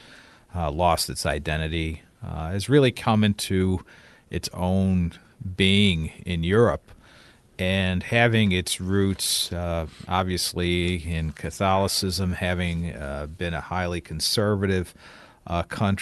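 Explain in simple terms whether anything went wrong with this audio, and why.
Nothing went wrong with this recording: the speech came through an ordinary call connection using the Opus codec, which removes the very highest frequencies above 12 kHz as it normally does, and nothing in the signal stands out as a problem.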